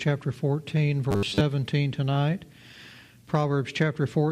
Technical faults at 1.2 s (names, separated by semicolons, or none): robotic sound from repeated short buffers